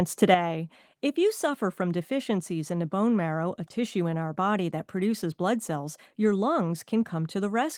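One channel drops out at 0.34 s through the end: the speech falls abruptly by about 6 dB, likely from losing one stereo side before the mono sum.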